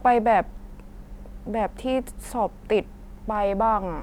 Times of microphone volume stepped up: none

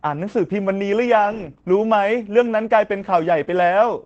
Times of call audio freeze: none

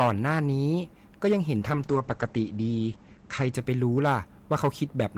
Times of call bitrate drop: 1.62-4.39

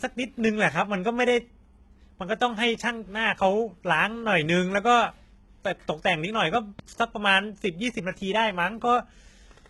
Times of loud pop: 6.55-6.81

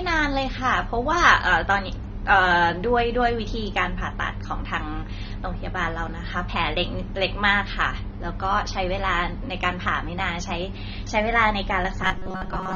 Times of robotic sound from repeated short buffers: 12.03-12.75

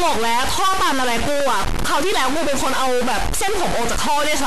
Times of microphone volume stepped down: none

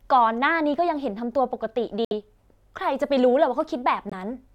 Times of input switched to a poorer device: none

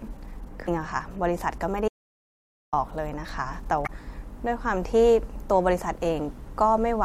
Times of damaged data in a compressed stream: 0.64-0.69, 3.83-3.89

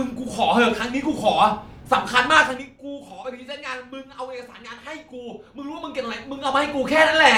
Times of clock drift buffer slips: none

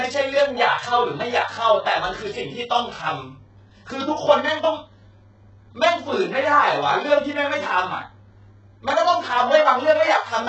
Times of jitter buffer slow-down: none

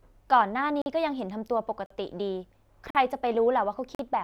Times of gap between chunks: 0.82-0.86, 1.86-1.90, 2.90-2.95, 3.95-3.99

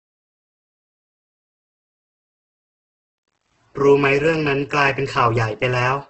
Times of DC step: none

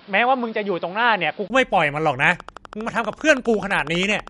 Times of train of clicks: 2.24-4.28

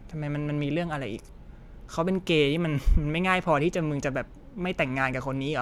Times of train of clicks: none

